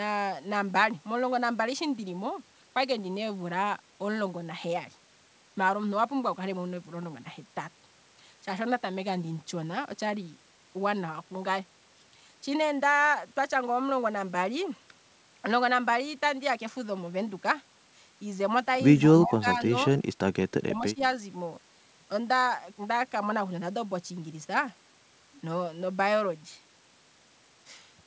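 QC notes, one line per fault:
19.01 to 19.1 s, echo leak: a faint delayed copy of the sound returns about 162 ms late, roughly 20 dB below the speech. It is brief. This is likely a far-end loudspeaker echo that the echo canceller failed to remove fully.
19.23 to 19.72 s and 20.49 to 21.02 s, speech suppressed in double talk: the speech level dips in pieces, by about 15 dB in the first run and about 20 dB in the second. Each run loses around 400 ms. Likely cause: the echo canceller mistook overlapping talk for echo and turned it down.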